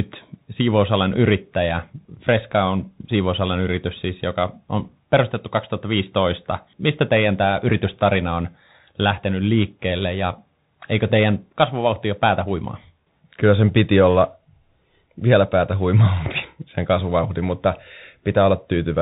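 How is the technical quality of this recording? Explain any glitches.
Technical quality is held back by one fault across the whole clip. Bluetooth CVSD headset codec runs throughout: one-bit up/down steps cap the speech near 4 kHz, so s sounds get scratchy and a grainy hiss sits underneath, which fits 64 kbps CVSD.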